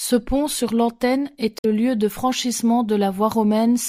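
From 1.57 to 1.65 s, just before "lieu de", there is damaged data in the compressed stream. Bytes in that stretch were corrupted, so the decoder misread the frames and lost sync. It recovered at the next frame header. The result is a brief chirp, squawk, click or short hole.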